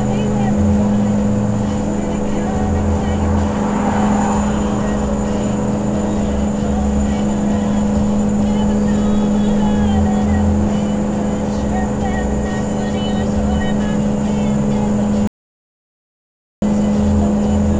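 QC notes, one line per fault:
15.27–16.62 s, audio dropout to silence: the sound cuts out for about 1.35 s into silence, no room tone. The input was likely lost while writing continued.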